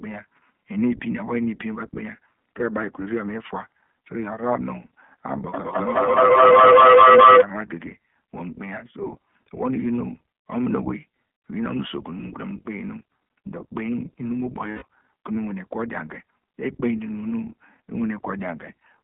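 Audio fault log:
Throughout, iLBC codec: the speech sits in a narrowband telephone line, roughly 150 Hz to 3.4 kHz, so nothing up top survives. Each 20 ms frame is coded on its own, which fits 15.2 kbps iLBC, and the damage is plainly audible as a rough, slightly synthetic edge.
14.72 to 14.83 s, lost iLBC frames: about 100 ms of packets went missing, and the decoder filled the hole by repeating the last pitch cycle with noise mixed in. You hear a short held, buzzy vowel, then the speech snaps straight back.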